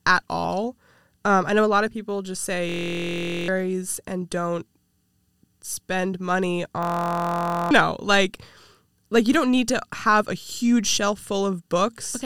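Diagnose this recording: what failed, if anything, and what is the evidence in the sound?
A system hang loop in the driver or buffer stage. From 2.69 to 3.48 s, after "of people just say", and from 6.83 to 7.71 s, after "spend money", one 23.2 ms slice repeats exactly as a steady 43.1 Hz buzz. That fits a 1024-sample buffer replaying while the host stalled. Unlike a silent dropout, these gaps buzz, and roughly 0.7 s and 1 s of speech are lost.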